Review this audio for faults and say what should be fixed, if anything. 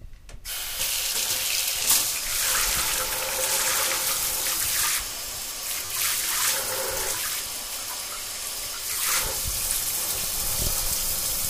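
Repeated buffer at 3.01 s, 5.85–5.90 s, 7.21 s and 8.93–8.95 s. Each time, the next block of audio arrived late and the playback device replayed the previous block, so a piece of about 12 ms, which fits a 512-sample buffer, sounds again with a hard join. Single repeats at 3.01 and 7.21 s come across as clicks. The longer runs at 5.85 and 8.93 s, with the piece repeating four and two times, give a brief buzzy stutter. Little or no audio seems to be missing. To prevent it, enlarge the output buffer or give the audio thread higher priority so each block is delivered before the device needs it.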